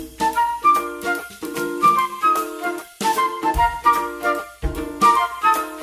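No technical faults can be heard anywhere in the recording.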